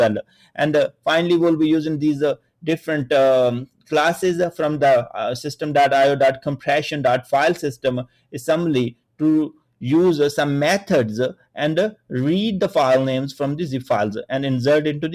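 From the very start there's a noise suppressor applied to music or sounds: a speech-tuned suppressor treats sustained tones and tails as noise, so the level keeps swinging by roughly 5 dB. Attacks survive, but held parts sag and pump.

On top of that, you get sound cut by the noise suppressor at 0.23–0.58, 0.88–1.06, 2.36–2.65, 3.66–3.91, 8.05–8.34, 8.92–9.20, 9.53–9.82 and 11.34–11.56 s. The suppressor dives by about 18 to 19 dB there, briefly hollowing out steady or fading material.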